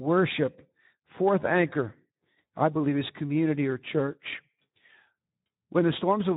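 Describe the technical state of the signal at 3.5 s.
At 3.5 s the speech is passing through the Speex codec, which affects the whole clip rather than this moment alone. The damage is consistent with a low setting around 11 kbps, where the CELP coder has too few bits to describe the excitation driving its vocal-tract model. The speech therefore sounds plainly degraded: grainy, hoarse and noisy in texture.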